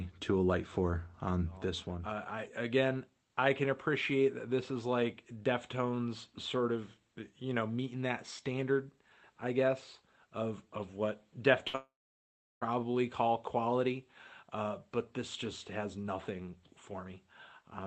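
A burst of packet loss at 11.67 to 11.75 s: about 60 ms of audio never arrived, and the receiver stretched the last sound into a brief fading fill before moving on.

A long network dropout, from 11.75 to 12.63 s, follows immediately. The concealed sound fades and gives way to about 0.72 s of silence, likely because the connection stalled, and the audio returns with roughly 0.86 s missing.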